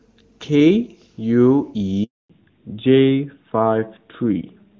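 A handover gap runs from 2.04 to 2.30 s. The call switched networks and, for those 260 ms, no speech frames arrived, so the voice dies away within a few tens of milliseconds, falls to silence, and whatever was said in that stretch is simply missing.

A fallback to narrowband follows from 2.30 s to the end. Before it, the clear, full HD Voice sound points to AMR-WB at a high rate. Afterwards, nothing above 4 kHz survives, which fits AMR-NB, and the sound turns duller and rougher.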